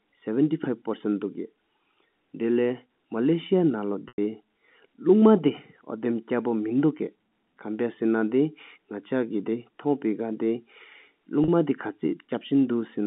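At 4.08 s (100 ms) and 11.44 s (40 ms), packet loss with pitch repetition loops the last pitch period: a brief buzzy hold, with the longer one fading into silence before speech returns.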